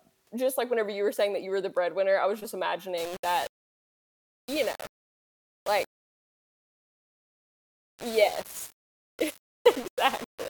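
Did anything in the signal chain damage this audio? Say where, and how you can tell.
Yes. Low bit depth without dither begins at 2.98 s, right after "breadwinner I was just", and runs to the end of the clip at 10.49 s. From that point the speech picks up a rough, grainy distortion that moves with the sound. It grows harsher on quiet passages, and the softest tails collapse into silence or sputter between levels. The error sits only around 20 dB below the signal, which fits a 5-bit word. The likely stage is a sample-format conversion that rounded each sample to a coarse step without adding dither. Because of that, the quantization error stays tied to the waveform instead of spreading out as a steady hiss.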